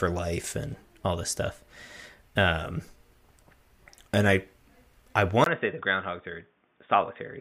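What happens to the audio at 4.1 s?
Nothing goes wrong at 4.1 s; the speech runs on intact through that moment, with no dropout, click, glitch or change in level or tone.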